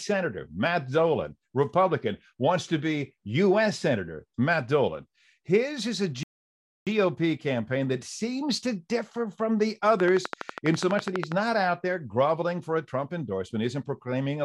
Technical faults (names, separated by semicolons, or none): playback stall; train of clicks